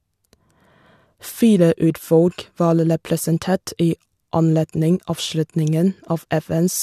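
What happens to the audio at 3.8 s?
Nothing goes wrong at 3.8 s: the speech there carries on cleanly, with no dropout, click, distortion or other audible fault.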